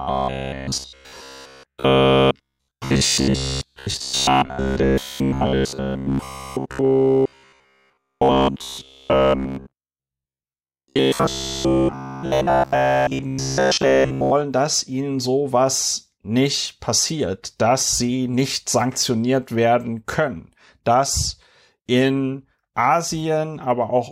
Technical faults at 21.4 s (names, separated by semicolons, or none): none